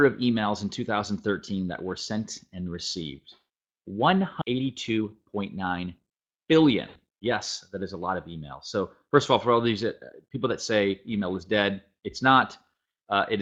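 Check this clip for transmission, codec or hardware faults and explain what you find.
Two transmission faults sit close together: a skip ahead followed by a burst of jitter buffer speed-up.

At 4.41 to 4.43 s there is a skip ahead. Roughly a second of audio was discarded, either in transit or by an overflowing jitter buffer, while later material was already queued. Playback jumps straight to that later audio with no fill, so the sound before and after is butted together. On a waveform the envelope changes abruptly at that point. On a spectrogram the harmonic and formant patterns break along a clean vertical edge with no gap.

From 4.53 to 6.52 s comes jitter buffer speed-up. The buffer was still holding more audio than its target, so the receiver repeatedly cut out short slices of one or a few pitch periods to shrink the delay. About a fifth of a second was removed, giving 111% speed at unchanged pitch, which sounds hurried. 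On a spectrogram the harmonic spacing stays the same while events crowd closer in time. The waveform shows many small splice points.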